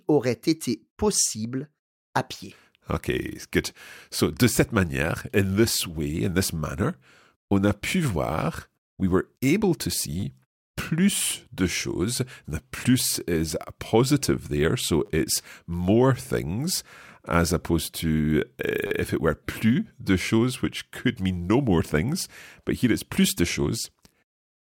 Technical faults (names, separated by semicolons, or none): repeated buffer